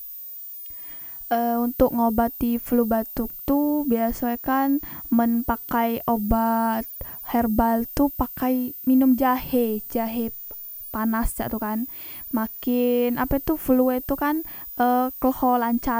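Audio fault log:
Throughout: switching supply whistle, a high tone wandering between 14.58 and 15.06 kHz, roughly 15 dB under the speech, from a switching supply running in audible burst mode or beating with another.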